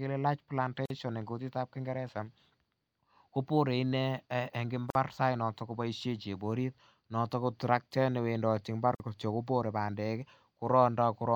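Speech broken by a gap at a join of encoded pieces at 0.86, 4.90 and 8.95 s: 46 to 49 ms silences every 4 s, after which speech resumes exactly where it stopped rather than skipping ahead like a dropout.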